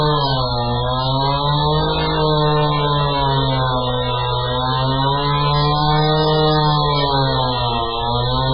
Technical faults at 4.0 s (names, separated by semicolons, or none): MP3 compression